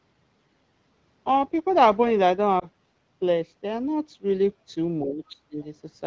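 A speech recording carried over a wideband call path, with two faults. At 2.60 to 2.65 s there is a short warble or level dip, the sound of lost AMR speech frames. The decoder bridges the gap by repeating its last good pitch and spectral settings at reduced gain, which fits a single lost 20 ms frame, and the voice comes back weak or rough for a moment. From 5.05 to 5.58 s the speech dips by about 30 dB, for around 0.4 s in total. This is likely speech suppressed in double talk: with both ends talking, the echo canceller cannot separate the near talker from loudspeaker echo and attenuates both.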